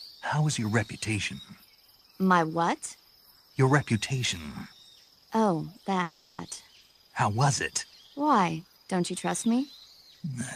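At 6.03 to 6.40 s there is a call audio freeze: the last sound stretches into a fading buzz for about 350 ms, likely because delayed packets emptied the jitter buffer. Unlike packet loss, nothing is skipped; the audio resumes where it stopped, running about 350 ms later.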